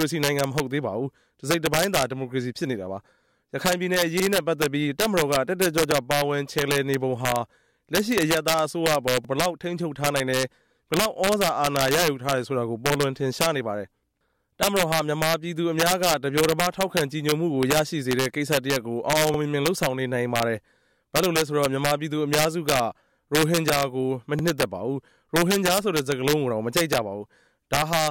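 Violent cracks break out on the loudest moments throughout the clip, far harsher than ordinary clipping. This is integer overflow. The level runs about 5 dB past what the integer format can hold. Instead of being limited at the ceiling, the peaks that exceed it wrap around to the opposite extreme, so each one jumps across the full range. Only a small fraction of samples, around half a percent, go over, which is why the cracks come in isolated bursts on peaks rather than as constant distortion.

A brief stutter is heard at 4.20 s, 9.25 s, 19.34 s and 24.39 s, each time a short fragment of sound seeming to play twice. These come from overlapping chunks. The audio was handled in 5-second blocks, and each new block began about 48 ms before the previous one had finished, so that sliver is repeated at the join. The result is a small jolt or doubled click at each boundary.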